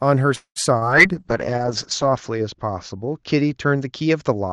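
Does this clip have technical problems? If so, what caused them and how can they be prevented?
Yes. There is a call audio freeze from 0.35 to 0.58 s. The last sound stretches into a fading buzz and then about 90 ms of silence. This is likely a packet delay that emptied the jitter buffer, so the audio resumes about 0.2 s late with nothing lost. A more stable network path or a deeper jitter buffer would prevent this.

There is short concealed packet loss from 0.79 to 0.83 s. About 20 ms of audio never arrived, and the receiver patched the hole by extending the preceding sound, which leaves a brief smear. Forward error correction or redundancy in Opus would help recover lost packets like these.

There is a call bitrate drop from 1.16 s to the end. The Opus bitrate falls from 48 to 9 kbps, staying at its lowest for about 1.0 s, and the bandwidth narrows from 12 kHz to 8 kHz. The audio becomes coarse and duller as a result. 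Setting a higher minimum bitrate and giving the call more reliable bandwidth would avoid this.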